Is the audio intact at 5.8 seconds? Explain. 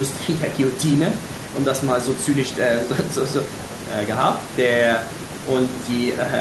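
Yes, the speech at 5.8 seconds is intact, with no audible fault at that moment.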